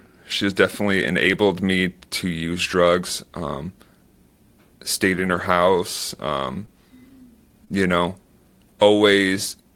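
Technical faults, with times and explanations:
1.23 to 1.33 s, lost packet rebuilt from error correction: a few lost packets were replaced by low-bitrate copies carried in following packets, so about 60 ms plays without a gap but sounds rougher and noisier. The waveform stays continuous, while the spectrogram shows a coarser, grainier patch.
5.15 to 7.74 s, scattered short gaps: about three brief holes, the longest roughly 15 ms, were patched by extending the preceding sound. About 160 ms was rebuilt to cover 60 ms missing, heard as small ticks and smears. The spectrogram shows thin frozen or smeared slivers.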